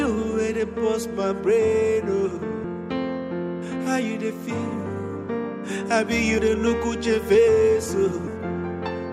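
At 2.64 s and 6.38 s, compressed frames are skipped. The audio jumps ahead by roughly 300 ms of 32 ms frames.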